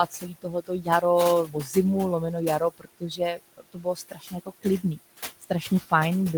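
Noise suppressor artifacts run throughout: the suppressor pulls the room noise, sitting about 17 dB below the speech, down by about 16 dB, leaving it sinking between words and rising under them.

Speech cut by the noise suppressor occurs from 0.06 to 1.03 s, 1.45 to 1.76 s and 2.2 to 4.98 s. Quiet speech is mistaken for noise and turned down by up to about 17, 11 and 19 dB, so the affected speech sounds swallowed or faint.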